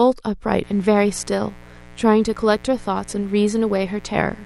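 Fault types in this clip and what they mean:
mains buzz: A steady, raspy buzz sits under the speech from 0.63 s to the end, roughly 25 dB below it. Sharp switching spikes from the 60 Hz supply leak in twice per cycle, spreading 60 Hz harmonics up into the kilohertz range.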